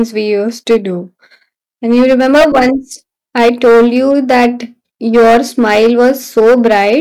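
Harsh fuzz rides on every loud syllable throughout the speech: hard clipping, with the signal overdriven by about 12 dB, so around a tenth of the samples are cut flat.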